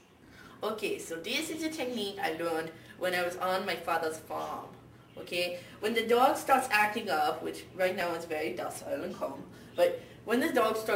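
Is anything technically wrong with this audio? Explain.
Yes, there is one fault, at 8.01 s: a dropped buffer (overrun), likely the cause. The software seems to have failed to collect a block of samples before the audio hardware overwrote it, so that block was lost and the samples on either side were joined end to end. Only about a millisecond and a half is missing. The sound skips forward by that amount with no gap of silence, leaving a tiny discontinuity in the waveform at that point.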